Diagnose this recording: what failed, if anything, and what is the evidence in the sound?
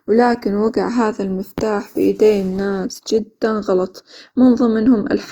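The codec stage failed: the sound points to a likely case of Opus compression, audible throughout the speech. The speech turns rough and grainy, with noise filling the upper spectrum rather than leaving gaps, and the band still reaches about 20.1 kHz. That separates it from MP3, whose spectral holes make a swirling, watery sound, and from Opus's speech mode, which would sound muffled and hoarse. The damage points to a low rate in music mode, around 24 kbps.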